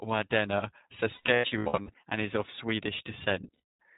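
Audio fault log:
throughout iLBC codec: narrowband coding consistent with 15.2 kbps and 20 ms frames removes everything above 4 kHz, leaving the speech plainly rough, dull and slightly synthetic.
1.14–1.94 s lost iLBC frames: about 500 ms of packets drop out, scattered over this stretch with runs near a tenth of a second. The decoder fills each gap by repeating the last pitch cycle with noise, giving held, buzzy vowel fragments before "and is of". The voice recovers almost at once because each frame decodes independently.
3.54–3.68 s lost iLBC frames: another burst of lost packets is concealed the same way, so the sound briefly turns into a sustained breathy buzz before normal decoding resumes.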